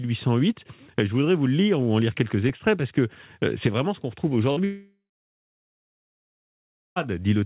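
At 2.44 s a wireless microphone squelch dropout occurs and lasts until 2.50 s. The radio signal from the microphone fades. Hiss and static rise briefly. Then the receiver's squelch shuts the output, leaving a hole of near silence only about 5 ms long. The speech returns at 2.50 s.

From 4.52 to 4.58 s there is a short concealed packet loss. About 40 ms of the call never reached the decoder in time. The receiver covered the hole by extending the last sound for about 44 ms and then blending back into the real audio. The result is a brief smear or wobble in the speech.

At 4.64 s, only a few hundredths of a second later, a much longer gap begins, likely a long network dropout. It lasts until 6.98 s. About 2.3 s of audio is lost. At first the receiver keeps stretching the last sound into a fading buzz or hiss. That fill gives way after a few tenths of a second. Silence then holds for about 2 s. 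The speech resumes at 6.98 s with the missing part simply gone. Throughout the clip, the G.711 call path leaves nothing above 4 kHz, which makes the telephone-band dullness audible on both sides of each fault.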